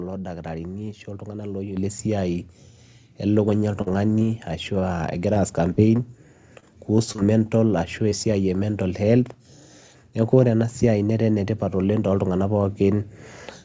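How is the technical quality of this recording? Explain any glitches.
The recording has four distinct glitches in a speech clip carried over a call path whose codec leaves nothing above 8 kHz, a band limit consistent with G.722 at around 64 kbps.

At 1.77 s the microphone volume is stepped up by about 7 dB in a single jump, as the call software raises the input gain. Voice and background rise together and stay louder. That sustained shared shift separates it from a dropout or a concealment artefact, which are brief.

From 3.82 s to 6.00 s there are scattered short gaps, roughly seven of them, with about 150 ms filled in total and the longest near 50 ms. Lost or late packets are patched by extending the preceding sound, giving isolated ticks and smears between clear stretches rather than continuous choppiness.

From 6.60 s to 7.47 s repeated packet loss produces a robotic sound. Four gaps, the longest 24 ms, add up to 72 ms of concealed audio. 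Each hole follows soon after the last, giving a chopped texture instead of separate hiccups.

At 8.09 s to 8.13 s a single short concealed packet loss fills 20 ms by continuing the last sound and blending back. It is one brief smear or wobble, isolated in time, unlike the clustered losses earlier.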